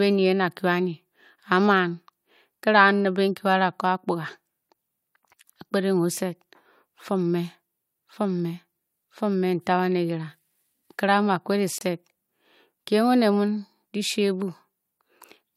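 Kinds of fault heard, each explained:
Gap between stream segments: a hard-edged 26 ms silence near 11.78 s in the speech, where the timestamps of two segments, fitting 6-second segments, leave a hole that the player fills with silence.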